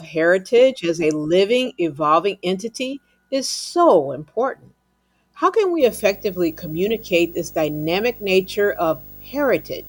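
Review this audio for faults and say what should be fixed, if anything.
Video or display buzz runs from 5.80 s to the end at 9.88 s. A 50 Hz field-rate buzz with hash sits well below the speech, plus a 15.6 kHz line tone. Reroute audio cables away from screens and video leads, and use balanced connections.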